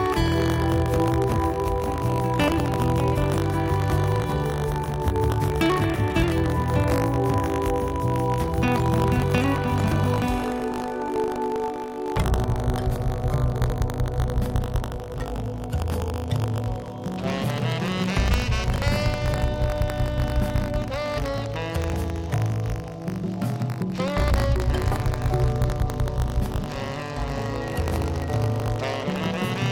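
Buffer tearing throughout: slipped buffer pointers splice a sliver of audio about 70 ms old into each period, causing a 50 Hz rattle and regular vertical spectrogram seams.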